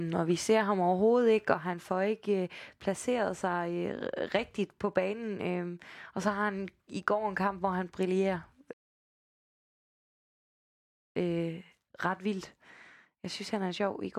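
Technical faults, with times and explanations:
1.54 s onward, sudden gain jump: a gain change was likely applied without a ramp, so sound and background noise drop together by about 4 dB and stay lower.
8.73 to 11.16 s, rebuffering stall: the player ran out of buffered audio and waited, so speech stops in silence for 2.4 s, then resumes exactly where it stopped.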